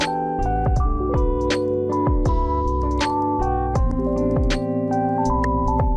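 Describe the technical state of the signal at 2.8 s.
At 2.8 s the signal is intact, with no audible fault present.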